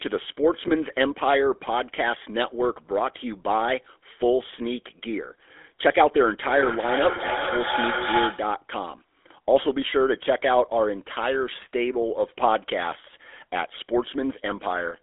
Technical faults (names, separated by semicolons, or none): GSM full-rate codec; lost GSM frames; feedback echo between two devices